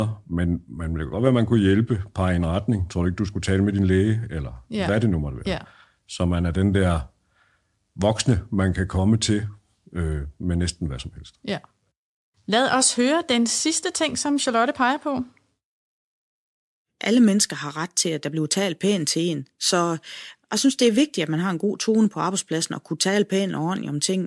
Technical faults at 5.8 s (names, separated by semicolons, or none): none